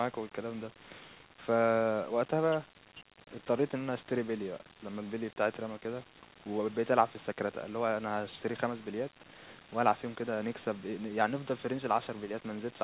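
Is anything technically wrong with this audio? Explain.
Yes. Brief echo leak occurs at 0.74 to 0.79 s, 1.26 to 1.30 s and 4.70 to 4.77 s: faint, delayed copies of the speech, trailing it by 484 ms, then 439 ms twice, very low in level, roughly 40 dB under the speech. The likely cause is a loudspeaker on the far end whose echo canceller let short fragments of its own microphone pickup return down the line. These fragments sit within a band limited to 4 kHz by the call codec.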